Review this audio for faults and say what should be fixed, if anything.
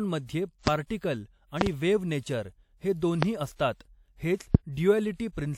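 Sharp pops land on top of the speech at 0.67–0.70 s, 3.23–3.25 s (just after "वेव्ह नेचर हे") and 4.55–4.57 s, each around 25 dB above it. A double pop, around 20 dB up, comes at 1.61–1.69 s, just before "वेव्ह नेचर हे". These loud pops are likely sudden voltage pulses from a plug, switch, static or driver glitch, added while the speech carries on underneath. To prevent them, secure all connections, avoid switching or static discharge during recording, and keep audio drivers stable.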